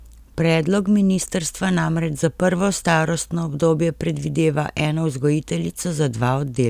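Speech recording with no technical faults to report.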